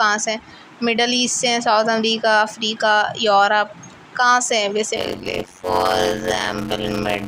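From 4.96 s to the end at 7.27 s, the audio takes on a steady buzz at about 91.9 Hz and slows to roughly half speed (0.533×) while keeping close to its normal pitch. This is a block size mismatch (padded). One stage hands over shorter blocks than the next stage reads, which fits 256 samples written into blocks of about 480, and the shortfall in each block is filled with silence. Those regular gaps produce the buzz at the block rate and stretch the timing.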